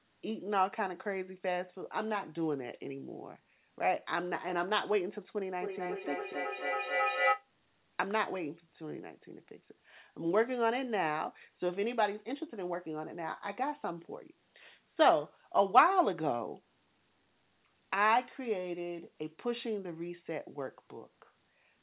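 From 5.59 to 7.49 s, a feedback echo between two devices appears: a second device in the room replays the sound, the first device's microphone recaptures it, and no echo canceller removes it. Repeats return roughly every 300 ms at about 0 dB relative to the speech, so they pile up rather than decay, ringing and thin inside the 4 kHz narrowband call path.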